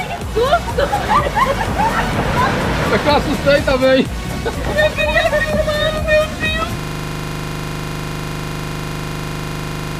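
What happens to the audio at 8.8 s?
At 8.8 s the audio is stuck in a system hang loop that began at 6.80 s and runs to the end of the clip. The system stopped supplying new samples while the playback hardware kept cycling through the same ring buffer, so one 40 ms slice of sound repeats exactly, about eighty times. The repetition at 25 Hz comes across as a rough, pitched buzz or rapid stutter at the loop rate rather than continuing audio.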